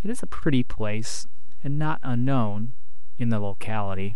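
A DC offset runs through the entire speech recording, from first sample to last. The waveform sits on a constant shift away from zero of about -17 dBFS, so the whole trace rides off the centre line and loses that much headroom on one side. The offset itself is silent, but a spectrogram shows it as a steady band of energy pinned at 0 Hz for the full duration.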